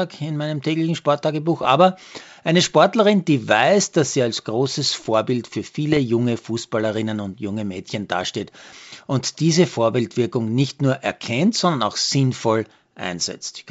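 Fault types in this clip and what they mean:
Bit errors on an ADPCM link: flipped bits upset the decoder's step size and predictor, so short rough pops with level jumps ring on, unlike the silent gaps of packet loss.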